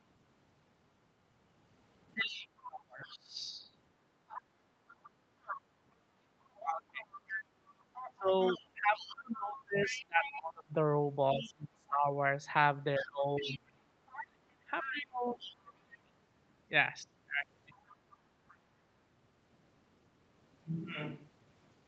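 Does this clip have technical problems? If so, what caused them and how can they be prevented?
Yes. Speech suppressed in double talk appears at 2.14 to 3.37 s, across 6.41 to 16.13 s, and briefly at 17.69 to 17.75 s. The talker's level dips by about 25 dB in the first two stretches (roughly a second and five seconds in total) and by about 15 dB in the last. The likely cause is an echo canceller that could not separate the talker from loudspeaker echo while both sides spoke, so it attenuated everything. On a waveform the envelope collapses in chunks, and a spectrogram shows speech bands thinning or breaking off, with the upper harmonics fading first. A headset, or an echo canceller tuned for better double-talk handling, would prevent this.

The other side's voice leaking through is heard at 2.26 to 2.47 s at about 15 dB below the talker, throughout 4.28 to 15.94 s at about 10 dB below, and at 17.74 to 18.55 s at about 30 dB below. 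It was likely left because the canceller did not fully remove the loudspeaker playback from the microphone. A spectrogram shows a second, fainter set of harmonic traces interleaved with the talker's. Wearing headphones keeps the far end out of the microphone.

A switch to a distant microphone occurs at 20.78 s and lasts to the end. The sound becomes hollow and roomy, about 5 dB quieter, with room noise about 35 dB below speech. The likely cause is a failed or dropped close microphone, with the fallback being one further away. On a waveform there is an abrupt step down in level. A spectrogram shows weaker low frequencies, smeared reverberant tails after each syllable, and a raised noise floor between phrases. Checking the close microphone's connection and locking it as the input device would prevent the change.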